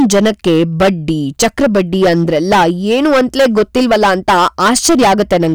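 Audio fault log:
Throughout, hard clipping: a harsh, gritty fuzz rides on every loud syllable of the speech, with crackle where the louder sounds peak. The signal is driven about 13 dB beyond what the stage can pass, so its peaks are sliced flat, and roughly one sample in seven hits that ceiling. Those squared-off tops add a spray of harmonics high up the spectrum, which is what turns ordinary loudness into the buzzing distortion heard here.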